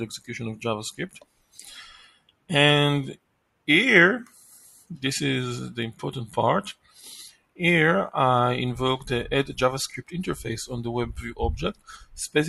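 A noise suppressor built for speech stays on across the whole clip, treating steady sound as noise, so levels pump with swings of roughly 15 dB. The sound cut by the noise suppressor sinks hardest at 1.09–2.5 s (about 20 dB), 3.15–3.68 s (about 20 dB), 4.25–4.96 s (about 16 dB), 6.7–7.07 s (about 19 dB), 7.29–7.6 s (about 20 dB) and 11.73–12.15 s (about 15 dB), where held parts and tails get swallowed.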